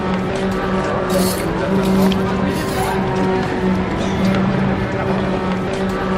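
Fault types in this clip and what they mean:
No technical faults can be heard anywhere in this audio, with the signal level, continuity and timing holding steady throughout.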